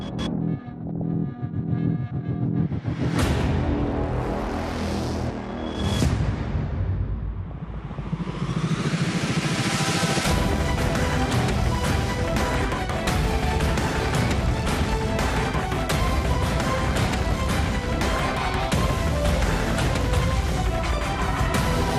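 All the way through, the sound is dull and gurgly, likely MP2 compression at a starved rate, around 80 kbps, where upper sub-bands switch off and what's left is coarsely quantised. On top of that there's DAB burbling at 0.87 to 1.14 s, 7.48 to 8.01 s, 10.09 to 10.60 s, 15.21 to 15.86 s, 18.13 to 19.14 s and 20.47 to 21.22 s. Bit errors that slipped past error correction make single sub-bands jump, giving short blips of noise.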